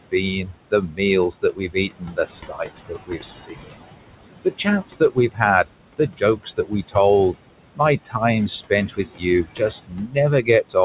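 Throughout the clip, the background drops away between phrases and swells back under the speech. These are noise suppressor artifacts: the processing pulls bands it treats as steady noise down by about 21 dB, frame by frame, against room noise sitting about 12 dB below the speech. The call path's band limit, with nothing above 4 kHz, fits narrowband G.711-style telephony coding.

From 0.11 to 3.79 s, parts of the speech turn faint and swallowed, together amounting to around a second and a half. This is speech cut by the noise suppressor, which mistook those parts for noise and lowered them by up to about 21 dB. The same swallowing returns from 4.45 to 6.96 s (up to about 19 dB, roughly 0.7 s in all), briefly between 7.75 and 8.21 s (up to about 18 dB, a fraction of a second), and from 8.7 to 10.76 s (up to about 21 dB, roughly 0.7 s in all).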